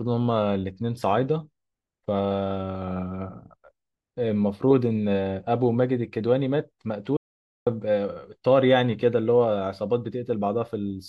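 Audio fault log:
7.17 to 7.67 s, audio dropout to silence: the speech cuts off mid-flow and about half a second of dead silence follows, with no room tone at all, before the sound snaps back in. That points to the input likely dropping out while the recorder kept writing silence.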